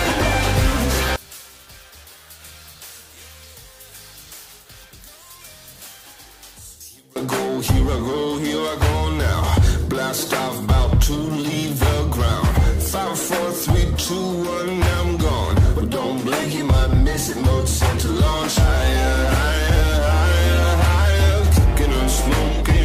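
From 1.16 to 7.16 s the sound drops by about 24 dB, likely one channel inverted cancelling in mono; the waveform visibly collapses and the spectrogram fades.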